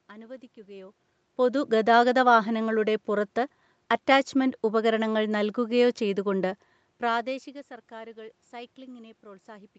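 No technical faults can be heard in this speech recording. The sound stops at about 8 kHz, as expected from the call's microphone processing and codec, and the level shifts around half a second in and again near six and a half seconds, as the talker moves relative to the microphone.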